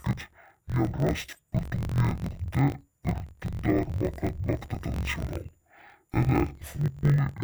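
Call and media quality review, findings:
Speech throughout sounds dull, robotic and choppy, an octave low, with a buzz at about 45.9 Hz. Interleaved audio read as planar: each 21.77 ms block's left and right halves played together at half speed. Probable component: decoder or resampler output stage.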